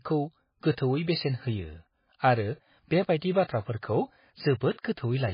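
From start to finish, the speech is band-limited and smeared. Nothing is heard above about 5.1 kHz, so the top end is gone and s sounds are dull and chirpy. Quiet detail flickers in and out, giving a watery, swirling texture. Consonant attacks blur. The damage is heavy. This is likely MP3 compression at a very low bitrate, near 18 kbps. Starved of bits, the encoder cut the treble at a fixed point and dropped weak frequency lines frame by frame.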